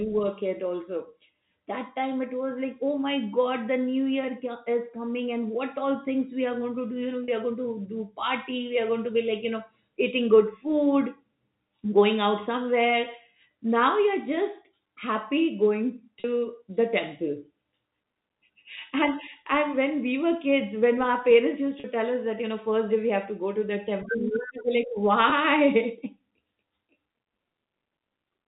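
At 7.24 to 7.28 s, right after "to do you know" and before "are going to do", there's packet loss with pitch repetition. About 40 ms went missing, which fits two 20 ms packets, and the receiver patched it by looping the last pitch cycle, so you hear a brief held, slightly buzzy tone. It happens the same way at 16.20 to 16.24 s between "you're just happy going" and "the temple", and at 21.80 to 21.84 s between "when our parents used" and "tell us that you". At 25.30 to 25.32 s a shorter 20 ms gap, likely a single packet, gives just a tiny buzz. All of this rides on the narrow, telephone-band sound of the G.711 link.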